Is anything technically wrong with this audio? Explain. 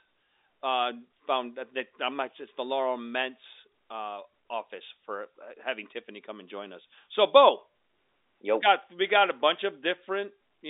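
No, nothing is wrong: the speech is carried over G.711 telephone coding, so it occupies only the 250 Hz to 3.7 kHz line band, which is what that path should deliver.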